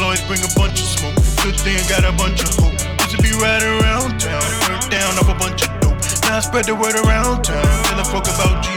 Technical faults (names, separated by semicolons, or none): audio missing between chunks